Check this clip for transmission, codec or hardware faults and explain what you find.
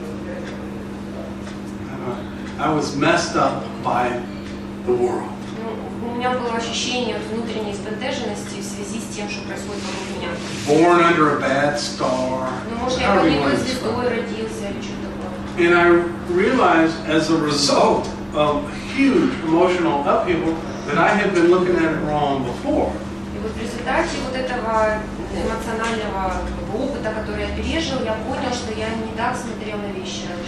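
No faults turned up when I checked this clip.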